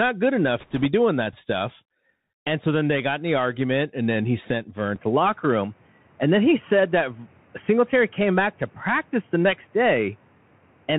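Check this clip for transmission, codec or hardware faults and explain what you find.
Three faults here: a narrowband Bluetooth codec on the whole clip, a short burst of link errors near the start, and a drop in bandwidth partway through.

The Bluetooth CVSD headset codec runs throughout, and its damage is plainly audible. CVSD sends one bit per sample, just up or down, with a step size that adapts, and the sound points to the usual 64 kbps headset link. Nothing gets through above 4 kHz, so the speech is boxy. Loud, bright bits overrun the step size and distort, the s sounds come out scratchy, and a grainy hiss sits under everything.

From 0.6 to 0.86 s there are bit errors on the Bluetooth voice link, at a rate of a few percent. In CVSD every bit carries the same small weight and any error decays quickly, so you don't get sharp clicks. Instead, that quarter-second picks up a rushing, crackly roughness laid over the speech. 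It's brief, and it clears once the errors stop.

At 4.96 s the sound gets duller and stays that way to the end. The likely cause is the input switching to a poorer device. Everything above 3.2 kHz disappears, which is narrower than the codec's own 4 kHz limit. A faint new noise floor comes in, roughly 35 dB below the speech. There's no gap at the switch and the level hardly moves, so what you hear is a sudden change in tone.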